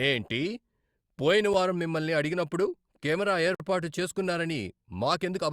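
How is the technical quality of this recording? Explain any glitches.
There's one clear glitch. At 3.55 s, right after "వారం మిమ్మల్ని అడిగినప్పుడు కెమెరా", a gap between stream segments cuts the speech with about 53 ms of hard-edged silence. The segment timestamps don't quite meet, which fits a 2-second segment boundary, so the player pads the hole with silence rather than dropping any audio.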